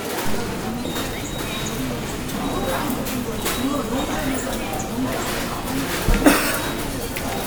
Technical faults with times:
none

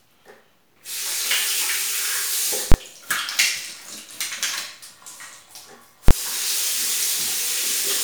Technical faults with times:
2.72-2.74 invalid numbers at full scale
6.08-6.11 invalid numbers at full scale

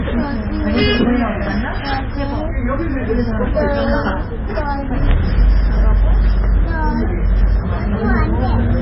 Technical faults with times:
0.00-8.81 MP3 compression

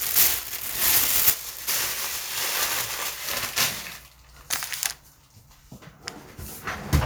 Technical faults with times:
none

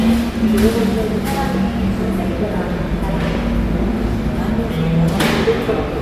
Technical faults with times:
none

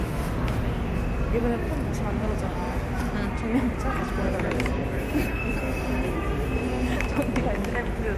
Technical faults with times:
none

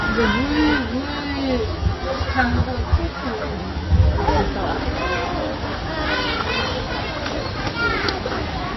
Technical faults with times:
0.00-8.77 MP3 compression
0.00-8.77 sample clock jitter
0.78-4.28 channel delay (comb filtering)

